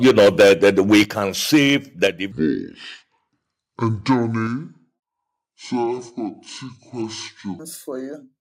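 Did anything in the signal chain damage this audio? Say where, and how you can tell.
Yes. Microphone overload at the converter: from 0.04 to 1.03 s the peaks run about 13 dB over full scale. Shorter bursts follow at 1.53 to 1.75 s, 2.03 to 2.07 s and 4.10 to 4.14 s. The crackle rides only the loudest syllables with flattened tops, likely from input gain set too high, rather than the steady buzz of a wiring fault.

The microphone volume stepped down in call processing at 0.06, 1.05, 2.07 and 4.47 s, by about 2, 7, 6 and 5 dB. Each drop is instant and takes background and speech down together, mostly just after a clipped peak, which points to automatic gain control rather than a gradual fade.

A section at the wrong speed runs from 2.32 to 7.59 s, ending before "for you". It plays at 0.591 times speed, so pitch falls about ten semitones and the speech drags. Pitch and tempo move together, likely a playback clock mismatch, unlike a pitch shifter that keeps timing intact.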